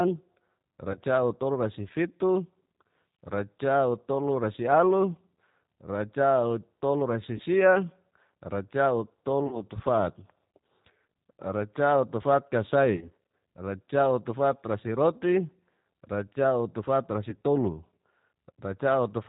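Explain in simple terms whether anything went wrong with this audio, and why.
The whole recording went through the G.729 codec, a phone-call format that rebuilds speech from a simple model of the mouth and a few pulses. Everything above 4 kHz is gone, so the voice sounds plainly muffled, rough and a little synthetic.

There are five short dropouts, each a case of VoIP packet loss concealed by the speech codec: at 0.92–0.98, 7.37–7.42, 9.47–9.63, 12.97–13.08 and 17.30–17.35 s. Data went missing, and the decoder guessed by stretching the last sound into a fading buzz or noise. Speech stays weak briefly afterwards.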